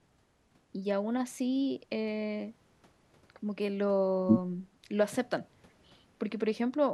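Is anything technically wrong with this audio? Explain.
No, nothing in this speech recording stood out as technically wrong on listening.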